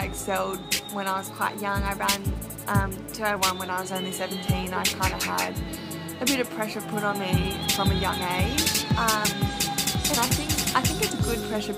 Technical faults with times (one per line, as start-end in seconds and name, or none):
1.27-3.36 drift correction step
8.60-9.26 drift correction step